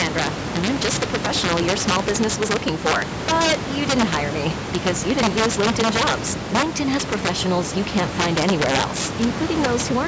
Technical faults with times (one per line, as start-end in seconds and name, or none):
0.00-10.07 integer overflow